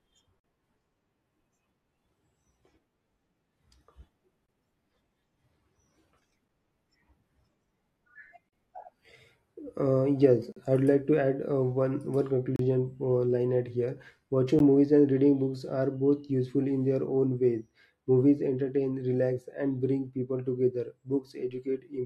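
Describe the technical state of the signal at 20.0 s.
At 20.0 s the speech signal is intact, with no audible fault at that moment.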